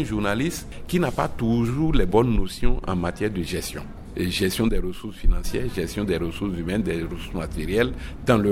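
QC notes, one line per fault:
No technical faults were found anywhere in the signal.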